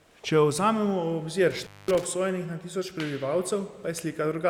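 A speech recording with an intermittent contact fault between 1.50 and 2.04 s: a loose connection breaks the signal, the line lying open for about 217 ms, with crackle at the edges of the break and faint hiss underneath, unlike a clean digital dropout, which falls silent without scratchy edges.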